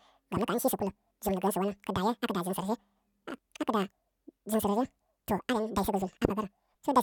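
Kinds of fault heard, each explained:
Audio read two samples at a time (double speed): throughout, the speech plays twice as fast and an octave higher. The reader treats each sample pair as one frame, skipping half, so content above the new limit folds back.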